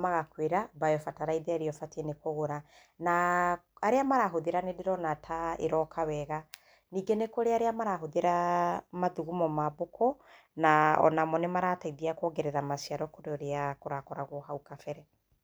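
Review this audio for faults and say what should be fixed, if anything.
No faults found in the speech, so nothing needs fixing.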